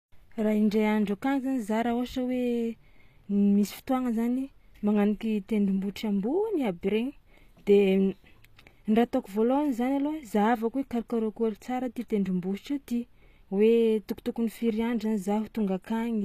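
HE-AAC compression, throughout the speech: the treble is likely rebuilt from copied lower bands, so s sounds turn gritty and metallic, with nothing above 14.9 kHz.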